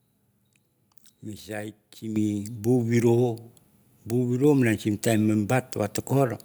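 At 2.16 s the speech and background jump up together by about 8 dB: a microphone volume step-up, where automatic gain control raised the input level in one jump.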